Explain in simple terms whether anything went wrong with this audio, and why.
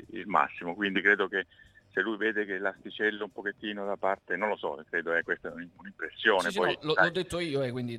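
Nothing went wrong technically here: the signal comes through steady and intact, with no interruptions, distortion or glitches at any point.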